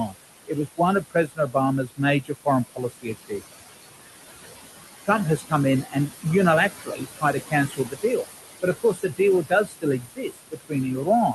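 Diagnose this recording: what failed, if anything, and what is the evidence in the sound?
Noise suppressor artifacts from the call-processing stage run through the whole recording. The room noise, sitting about 9 dB below the speech, is pulled down by about 17 dB between phrases and then swells back under them. On a spectrogram the gaps show a patchy, fluttering noise floor.

Speech cut by the noise suppressor, also in call processing, happens where the suppressor mistook quiet speech for noise. This occurs at 0.07–0.16 s, 0.47–3.42 s, 5.05–6.26 s, 6.7–8.27 s and from 8.62 s to the end. Drops reach about 14–21 dB, and the affected speech sounds swallowed. On the waveform and spectrogram these show as notched, dimmed syllables.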